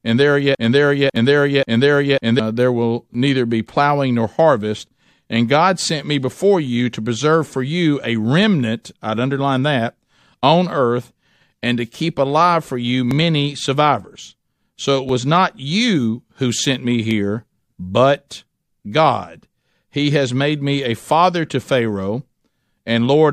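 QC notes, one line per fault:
0.00–2.39 s, broken-record loop: a 548 ms fragment, already repeating when the clip opens, plays back to back three times before "there will," likely from a stalled stream.
1.16, 3.14, 13.11 (after "keep alive for you"), 15.09–15.11 and 17.11 s (after "you who sent me"), overlap between stream segments: tiny skips at 2 s segment joins where overlapping timestamps trimmed real audio.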